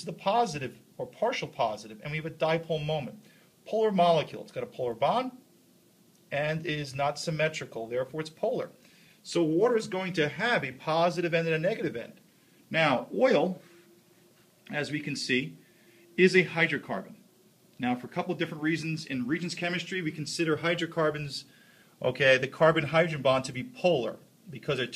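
No technical fault can be heard anywhere in the audio, with the signal staying continuous and steady throughout.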